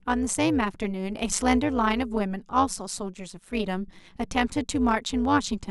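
From start to end, the speech carries overlap-add ripple. Frames were rejoined with mismatched overlap. Level swings about 11 dB at around 200 Hz, giving a metallic buzz with extra tones around each note.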